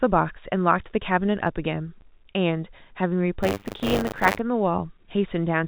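Packet loss filled with silence occurs at 2.01 s. A 10 ms stretch of the speech drops to silence, consistent with a single lost packet that the receiver replaced with nothing. The hole has abrupt edges.

Buffer tearing runs from 3.42 to 4.40 s. The writing and reading positions in the playback ring buffer have drifted until they cross within each period. A small share of every buffer, roughly 15 percent, replays audio from roughly 40 ms earlier, with hard joins on both sides. Over the speech this is heard as a rattling, robotic buzz at 100 Hz, which also fits a 10 ms period. The whole clip carries the narrow telephone band of G.711 A-law coding.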